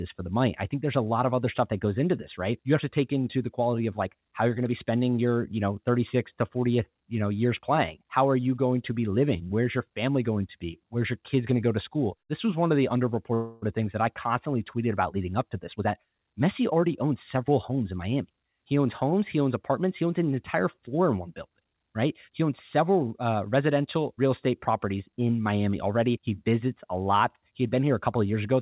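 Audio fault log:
13.34–13.64 s, call audio freeze: after "was one of the", a fading buzz fills 0.28 s before "things that I constantly" resumes intact, likely from delayed packets emptying the jitter buffer.
15.73–17.91 s, jitter buffer speed-up: after "about leading up to", speech hurries at 113% speed with unchanged pitch as the buffer trims repeated pitch periods, roughly a third of a second in all.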